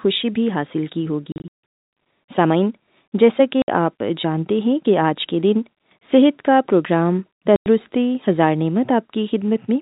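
Packet loss filled with silence hits at 1.32 to 1.51 s, 3.62 to 3.68 s and 7.56 to 7.66 s. Missing packets became dead gaps with hard edges. Gap lengths fit 20 ms packets; the longest run in the first event is 80 ms. The telephone-band G.711 sound is audible throughout.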